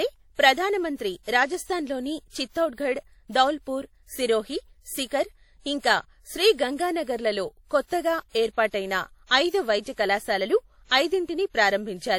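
Throughout the speech, two kinds of coding artefacts layer together, likely from transcoding between lossy codecs, pointing to MP3 then WMA. Nothing sounds above 20 kHz.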